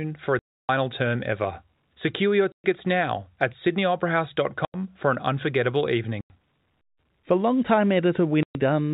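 Packet loss filled with silence cuts into the speech at 0.39 to 0.69 s, 2.52 to 2.64 s, 4.65 to 4.74 s, 6.21 to 6.30 s and 8.43 to 8.55 s. Pieces of the stream never arrived, and the receiver played dead air instead of hiding the gaps. The holes last 300, 120, 90, 90 and 120 ms. These are all multiples of 30 ms, which fits 30 ms packets. Each hole starts and stops abruptly against the narrowband G.711 telephone sound.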